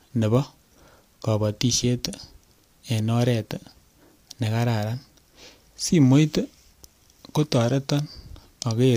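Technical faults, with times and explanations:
No technical faults are present in this speech recording.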